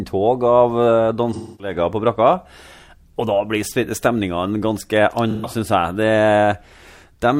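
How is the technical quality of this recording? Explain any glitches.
The recording has two brief dropouts where the speech turns smeared and hollow. From 1.33 to 1.74 s, just before "på brakka", a quarter-second patch goes phasey and noisy. From 5.31 to 5.50 s a shorter stretch blurs the same way. Both are AAC frame loss with concealment. The decoder lost compressed frames, about 256 ms and 128 ms of audio, which fits six and three frames, and filled the gaps by reusing the last good spectrum, so the result sounds plausible but smeared and unstable.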